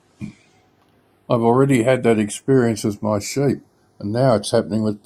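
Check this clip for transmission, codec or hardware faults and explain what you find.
The speech shows one fault throughout: channels drifting apart. The two channels run on clocks roughly 40 ppm apart, so their offset grows to a fraction of a millisecond. Summed to mono, comb notches sweep slowly, heard as gradual flanging. A fixed offset would leave the notches still.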